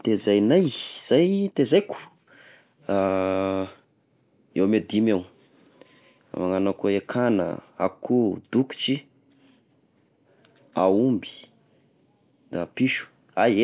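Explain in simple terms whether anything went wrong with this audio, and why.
Nothing went wrong here.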